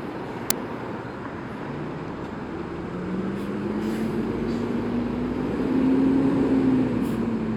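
An uninitialised buffer fault occurs at 0.50 s: a single block of about 5 ms was sent to the output before any audio had been written into it, so whatever stale data sat in that memory was played as if it were samples. Because those values bear no relation to the surrounding sound, the result is a brief, loud crack that cuts abruptly in and out of the audio.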